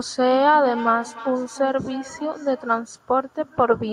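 Feedback echo between two devices, with a nearby device replaying this microphone's signal: from 0.64 to 2.96 s, speech returns roughly every 300 ms, about 15 dB down.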